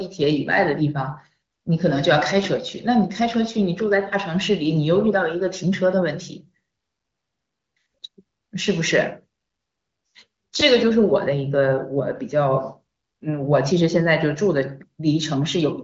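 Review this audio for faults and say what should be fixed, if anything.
Nothing in this speech needs to be fixed, as the review finds no faults.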